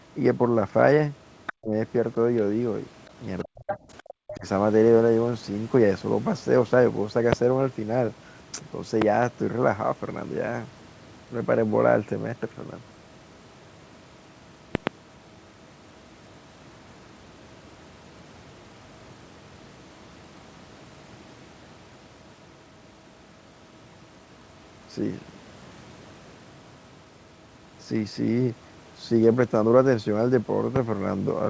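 Between about 1.46 and 4.46 s, you can hear the other side's voice leaking through in brief scraps, at 1.46–1.53, 3.05–3.10, 3.70–3.77 and 3.98–4.14 s. The loudest is only about 10 dB under the talker, likely echo the canceller didn't fully remove. Interleaved with those scraps is speech suppressed in double talk: the talker drops out almost completely at 1.51–1.73, 3.44–3.77 and 4.19–4.46 s. That's likely the canceller ducking everything while both sides overlapped. After that come loud pops: single sharp clicks at 7.33–7.35, 9.02–9.04 and 30.76–30.78 s, and a quick double at 14.75–14.89 s, up to about 25 dB above the speech. They're likely voltage glitches, with the talk carrying on underneath.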